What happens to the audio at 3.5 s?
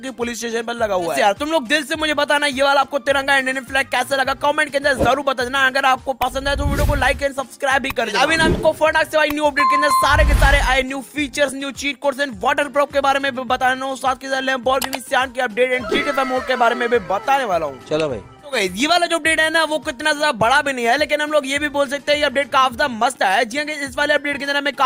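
Nothing goes wrong at 3.5 s; the audio plays through that moment intact, with no dropout, click or other fault to be heard.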